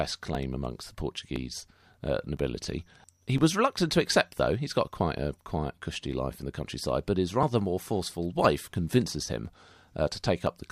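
Speech with periodic USB or driver dropouts: from 0.35 to 10.47 s, roughly 10 ms of audio is skipped every 1.01 s, producing regular ticks.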